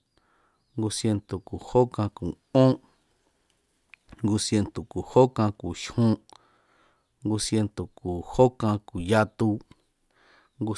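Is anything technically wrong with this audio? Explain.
No, nothing technically wrong can be heard here.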